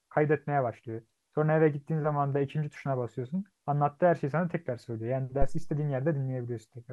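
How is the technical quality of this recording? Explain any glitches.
The recording has one technical fault, a phantom power thump from 5.42 to 5.81 s. A supply was switched on or off on a live input, and the sudden voltage step passed through the input's coupling capacitors into the signal path. In the speech it comes through as a deep low-frequency thud peaking at about -14 dBFS, whose main energy dies away within about 88 ms, leaving a fading tail before the sound returns to its level beforehand.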